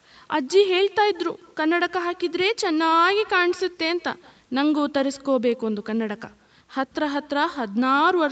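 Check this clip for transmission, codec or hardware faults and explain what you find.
One fault runs through the whole speech clip: echo with no canceller. The far end's loudspeaker output re-enters its microphone uncancelled, so each phrase returns around 150 ms later as a thin copy about 23 dB down, within the 8 kHz band limit of the call microphone processing.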